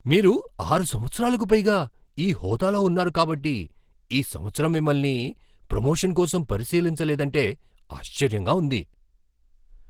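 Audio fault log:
Throughout: Opus compression, likely the cause of the plainly audible damage across this speech, which sounds muffled and hoarse, the way Opus gets when it drops into hybrid mode at a low rate around 16 kbps, even though content still reaches about 20.2 kHz.
2.17 s: pre-echo, a short smear of hiss spreading roughly 10 ms ahead of a sharp onset. The codec spreads quantisation noise across the whole transform block, so noise scaled for the loud attack leaks into the quiet moment just before it.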